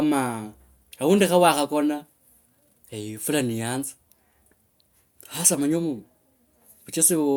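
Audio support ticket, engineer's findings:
No faults found on playback.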